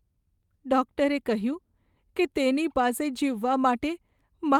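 No technical faults can be heard anywhere in this recording.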